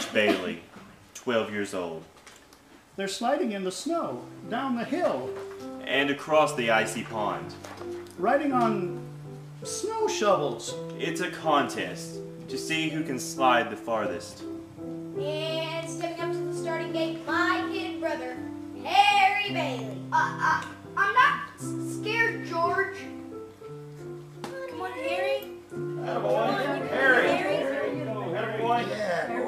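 No technical faults are audible.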